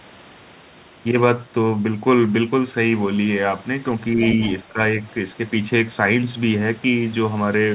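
From 4.15 to 4.21 s, the speech dips by a few decibels. This is speech suppressed in double talk. Both sides likely spoke at once, so the echo canceller turned the talker down along with the echo. The same happens from 4.56 to 4.81 s, with a deeper drop of about 10 dB lasting about a fifth of a second.

Between those dips, from 4.23 to 4.52 s, the other side's voice leaks through, about 15 dB below the talker. The echo canceller likely failed to remove all of the loudspeaker sound from the microphone, so a faint second voice slips in. Like the rest of the call audio, it is band-limited to 4 kHz.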